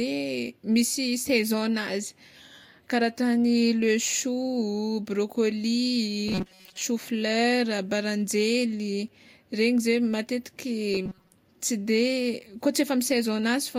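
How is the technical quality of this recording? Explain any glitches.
Two brief glitches of robotic sound from repeated short buffers occur, from 6.28 to 6.82 s and from 10.94 to 11.32 s. In both, the speech turns into a rigid metallic buzz pitched at 188 Hz that still loosely tracks the talking. The likely cause is audio arriving too slowly, with the software looping a roughly 5.3 ms fragment to fill the gaps, so most of the real sound in those stretches is skipped. A waveform would show identical cycles repeating every 5.3 ms, and a spectrogram would show evenly spaced horizontal lines at multiples of 188 Hz.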